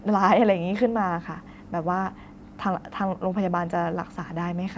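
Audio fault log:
No faults found; the speech carries the usual call microphone processing, with the lowest bass trimmed by its high-pass and nothing above 8 kHz, both normal for that path.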